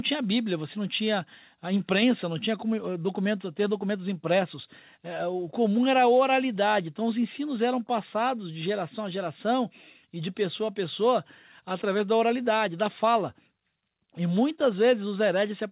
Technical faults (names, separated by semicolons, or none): none